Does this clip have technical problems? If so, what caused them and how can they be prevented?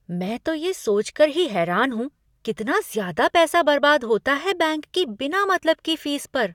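No, nothing in this speech clip points to a technical problem, so there's no cause to track down and nothing that needs preventing.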